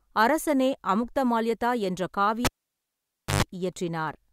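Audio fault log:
2.45–3.43 s: cable pulled and plugged in. A pop breaks the speech as the live cable comes out. Near silence follows for 0.93 s. Then a 50 Hz mains buzz lasts 0.12 s while only the plug tip touches. A second pop brings the sound back.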